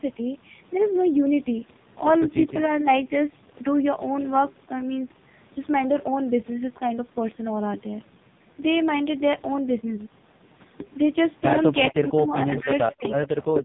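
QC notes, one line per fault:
throughout, AMR narrowband mobile codec: heavy codec damage. Nothing comes through above 3.8 kHz, and the voice sounds buzzy and synthetic because a vocal-tract model driven by a few pulses is rebuilding it. That points to one of the lowest AMR-NB modes, around 5 kbps.
12.92 to 13.62 s, echo leak: a faint delayed copy of the talker trails about 425 ms behind, well under the main voice at roughly 15 dB down. Likely a loudspeaker on the far end whose echo canceller let some of its mic pickup slip back.
13.61 to 13.65 s, speech suppressed in double talk: the voice briefly collapses, a deep dip of around 30 dB lasting only about 40 ms. Likely the echo canceller couldn't tell the talker from the leaking echo and ducked everything together.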